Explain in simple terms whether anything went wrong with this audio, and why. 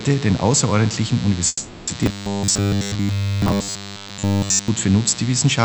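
Three things went wrong.

A mains buzz runs under the whole clip. Electrical interference from the power supply leaked into the recording as a steady, raspy hum based on 60 Hz, the mains frequency used in places like North America. Its harmonics stack up into a harsh drone. The buzz is fairly loud compared with the wanted sound, so it is easy to hear in every quiet moment.

From 1.47 to 1.89 s there is a call audio freeze. For about 400 ms the last bit of sound is stretched into a fading buzz or hiss, with a tiny silent gap of around 10 ms. The likely cause is that data from the call arrived late and the receiving end ran out of audio to play. Nothing was lost, but everything after it is pushed about 400 ms later.

From 2.03 to 4.68 s the sound turns into a stiff, metallic buzz. This is robotic sound from repeated short buffers. The likely cause is that fresh audio arrived too rarely, so the software kept replaying a very short slice instead. 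All of this stretch is repeats. The repeating slice imposes a fixed 100 Hz buzz, which fits a slice about 10 ms long, and the real audio during that time is skipped.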